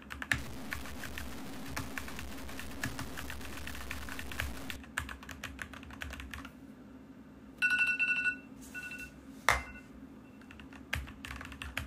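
From 0.38 to 4.76 s the sound turns gritty and grainy. The grain tracks the signal. This is likely low bit depth without dither, fitting 7-bit truncation.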